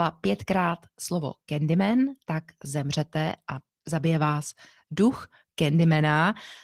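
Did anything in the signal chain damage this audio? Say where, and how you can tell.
Yes, at the codec stage, throughout the speech. Opus voice compression is plainly audible, and the damage fits a bitrate around 16 kbps in hybrid mode. The lower band sounds hoarse and slightly robotic from coarse excitation coding. Above 8 kHz, a thinly coded layer is still present. A plain low-pass filter would only dull the sound; here the texture itself is damaged.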